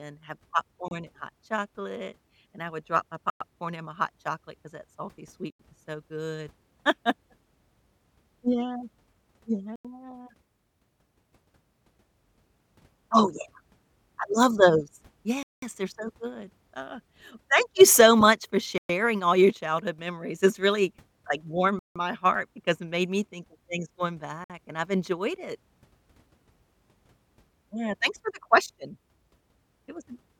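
The speech keeps dropping out to dead silence at 0.88, 3.30, 5.50, 9.76, 15.43, 18.78, 21.79 and 24.44 s, then carries straight on. Gaps run from about 30 ms up to nearly 200 ms. The longest falls between "I love those" and "they're so good uh". This sounds like a Bluetooth stall, likely from radio interference delaying packets until the headphone buffer emptied and playback paused.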